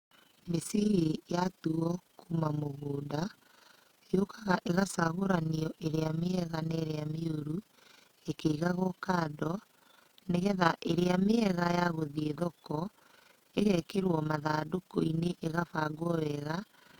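From start to finish the speech carries overlap-add ripple: a fast, rough flutter in the level. The audio was split into windowed frames and rejoined with an overlap whose windows do not add up to a constant gain, so the level swells and dips once per frame. Here the swing is about 11 dB, repeating at roughly 30 times a second, quick enough to read as a rough flutter rather than a distinct pulse.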